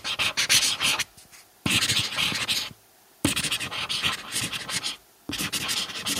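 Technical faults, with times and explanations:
Nothing stood out as a technical problem on a careful listen.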